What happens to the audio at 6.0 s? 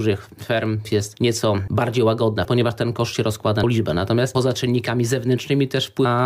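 At 6.04 s there is a brief blip caused by damaged data in a compressed stream. Corrupted bytes make the decoder misread the affected frame and lose sync, so it briefly outputs garbled audio while it searches for the next valid frame header.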